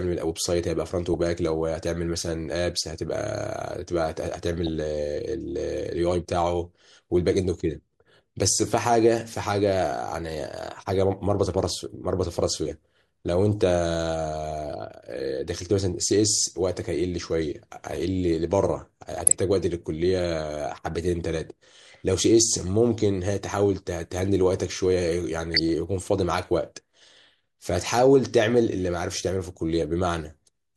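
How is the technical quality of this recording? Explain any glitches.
Technical quality is let down by four short bursts of DAB burbling, at 1.14–1.26 s, 4.53–4.68 s, 19.01–19.32 s and 25.42–25.59 s. Weak reception lets bit errors, a fraction of a percent, slip past error correction into the MP2 stream. Corrupted samples and scale factors throw individual sub-bands briefly out of level, so the speech picks up short blips of noise, longest in the burst near 19 s.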